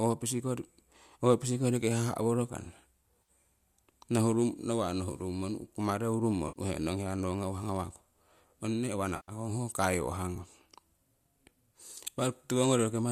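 At 3.22 s, just after "koriki haha' worokana", the speech briefly smears for about 50 ms. At 6.48 s, after "kumareu rummo", a longer 80 ms patch turns noisy and phasey. At 9.16 s, after "ong nee uwa" and before "ho kaiwahgung", a 120 ms gap sags and recovers. All three are AAC frame loss with concealment. The decoder rebuilt missing frames from the last good spectrum. The gap lengths fit 10 ms frames, likely from low-delay AAC.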